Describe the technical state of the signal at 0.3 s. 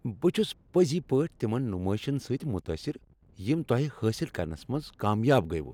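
At 0.3 s the speech signal is intact, with no audible fault at that moment.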